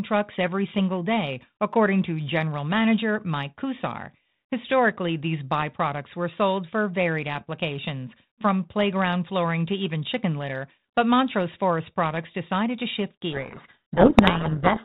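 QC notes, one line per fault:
13.32–14.84 s, codec payload misread: right after "decided to shift" the speech is buried under harsh, rasping distortion until the clip ends. The G.726 decoder is reading each code word with its bits in the wrong order, so every wrong difference value also feeds the adaptive predictor and the error compounds. Before this the telephone band stops at 4 kHz with only light ADPCM hiss, which fits 32 kbit/s G.726.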